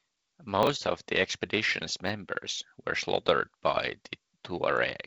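Chunks out of order at 0.63 to 0.67 s and again at 2.07 to 2.09 s. In each, a short block of about 10 ms reaches playback late and is slotted in after material that should have followed it: three blocks later in the first case, one in the second. Nothing is missing, but the sequence is scrambled, and the hard joins around the displaced piece produce a jumbled, garbled instant in the speech.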